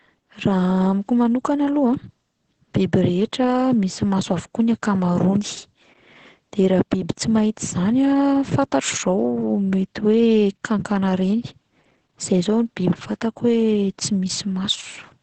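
Speech here, and the whole clip carries Opus voice compression damage: everything stops near 8.7 kHz, leaving it muffled, with a hoarse, slightly robotic edge from the coarse excitation coding. That heavy damage from the SILK coder fits a bitrate around 10 kbps.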